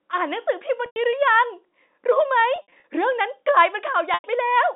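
Speech over a narrowband phone line, 250 Hz to 3.7 kHz, which fits G.711 mu-law coding, with packet loss and pitch repetition at 0.86–0.96 s, 2.56–2.84 s and 4.14–4.24 s. The receiver loops the last pitch period across each 100 ms gap, and across 140 ms scattered over 280 ms in the middle event, fading it out over about 50 ms, so a brief held, buzzy tone fades into silence before the speech returns with a short cross-fade.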